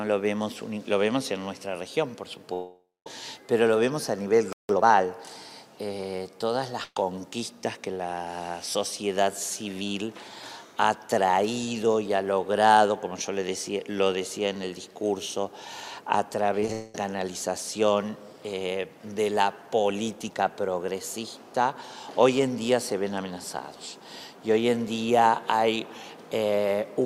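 Starting at 2.53 s and running to 3.07 s there's what is likely a long network dropout: about 0.53 s of audio never turns up. The last sound gets stretched into a fading buzz or hiss, goes silent for roughly the final fifth of a second, and then the audio picks up further along with that chunk gone.

At 4.53 s the output just stops dead for 165 ms, which sounds like a playback stall, likely from the player running dry or getting blocked. Right after, from 4.69 s to 4.85 s, you get the time-compressed catch-up: the sound runs at double speed while keeping its normal pitch, as the player cuts and cross-fades small pieces to chew through the backlog.

From 6.84 s to 6.97 s there's a burst of packet loss. About 120 ms is missing, and the receiver fills it by carrying the last sound forward and turning it down, with the final 40 ms going silent before the audio resumes further on.

Around 16.6 s there's a cluster of short concealed packet loss, at 16.60 to 16.63 s (20 ms), 16.66 s and 16.68 s (about 10 ms each). 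Each hole gets patched by extending the preceding sound and blending back in, so you hear quick smears or wobbles.

Right on their heels, from 16.73 s to 16.95 s, comes another likely long network dropout, a shorter one at about 210 ms. This time the extended, fading sound covers the whole gap without dropping to silence, and then the audio jumps ahead past the lost part.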